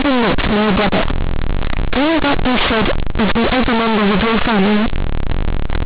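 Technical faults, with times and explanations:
Throughout, companded audio read as linear. The speech was coded as A-law but is being played back as plain linear 8-bit samples, with no expansion step. A-law bytes store a sign bit and a logarithmic level. Read as linear, every sign change flips the output across roughly half its range. Quiet passages come out as loud as peaks. The waveform is badly bent, so the speech sounds very loud and buzzy. Pauses fill with harsh noise. The A-law telephone coding beneath it, at 8,000 samples a second, is intact but buried under this distortion.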